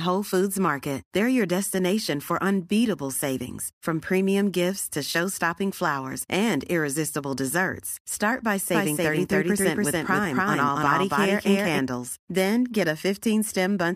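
From 8.75 s to 11.79 s the speech carries a doubled audio track: a second, full-band copy trails the original by around 300 ms at about the same loudness. The likely cause is the signal being captured twice, once through a slower path. Unlike an echo or reverb, the copy has no decay and no room colour, and it switches on and off abruptly at those points instead of fading.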